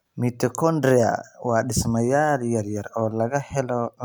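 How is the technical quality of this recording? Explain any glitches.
The recording has no technical glitches to explain. Nothing in the speech calls for a fault to be described.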